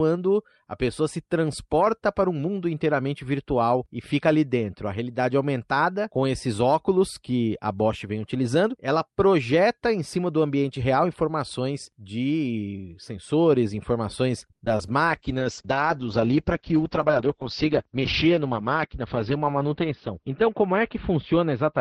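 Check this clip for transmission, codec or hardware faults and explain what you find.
There's a cluster of network trouble around 14.5 seconds, then a bitrate drop that lasts to the end, with a speed-up inside it.

Right after "informações de sensores informações", at 14.51 to 14.61 s, there's a short stall from a late packet. The jitter buffer ran dry, so the receiver stretched the last sound for 80 ms until the packet showed up. Nothing is lost, but the sound hangs a beat too long.

Two bursts of short concealed packet loss follow, at 14.65 to 14.68 s and 14.77 to 14.87 s. Each time about 20 ms never reached the decoder, and the gap was patched by extending the preceding sound before blending back in. You hear a quick smear or wobble, and the second patch adds a little extra length.

From 15.06 s to the end there's a call bitrate drop. Opus falls from 32 to 8 kbps and its bandwidth from 20 kHz to 6 kHz, sitting at the bottom for about 5.1 s. 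The speech goes muffled and watery, losing its top end.

Between 16.60 and 18.03 s there's a jitter buffer speed-up. The buffer held more than it wanted, so the receiver snipped out pitch-period slices, roughly a tenth of a second in total. Speech runs about 6% fast at unchanged pitch, so it sounds slightly rushed.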